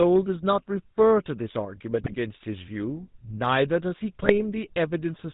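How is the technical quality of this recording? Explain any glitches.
The speech has plainly audible codec damage throughout, plus three short glitches.

GSM full-rate codec: for the whole clip the speech sounds buzzy and gravelly, with nothing above 4 kHz. That points to the original 13 kbps GSM coder, which models the vocal tract and drives it with sparse, regularly spaced pulses. Unlike plain low-bitrate muffling, the roughness is gritty and pulse-like.

Hard clipping: from 1.00 to 1.13 s the peaks are pushed about 2 dB past the limit of a stage and cut flat. The flattened tops add high harmonics, heard as brief crackle on the loudest moments. Because the overload is mild, the harshness rides only the peaks, not a constant fuzz, and there's no gargling.

GSM bit errors: at 2.04 to 2.15 s and 4.22 to 4.39 s, corrupted bits reached the decoder, likely from a weak radio link. The wrong filter, pitch and gain values warp the spectrum and level for a few frames, producing squawks, pops and gargling. 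That sudden tonal distortion sets these apart from clipping's peak-bound crackle.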